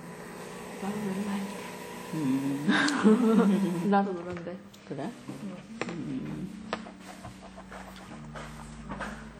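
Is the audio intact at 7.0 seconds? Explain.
No. At 7.0 seconds, as through the whole clip, the sound carries WMA compression damage, plainly audible. This is likely a transform codec working in long blocks at a low bitrate, consistent with about 48 kbps. Quantisation noise smears across tens of milliseconds around each event and faint components drop out, so the sound rings and turns washy, with a hiss that swells and fades with the signal. Nothing reaches above 19.9 kHz.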